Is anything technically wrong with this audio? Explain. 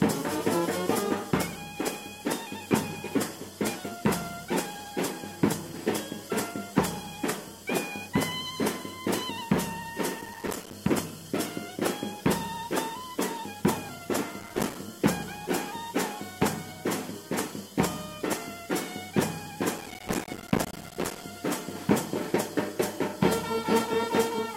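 Yes. Processor overload crackle occurs at 10.21 to 10.73 s, 14.40 to 14.76 s and 19.78 to 21.24 s. The processor misses many buffer deadlines in a row, each leaving a tiny silent gap. The short dropouts fit buffers of about 5 ms and merge into gritty crackle, longest in the last burst.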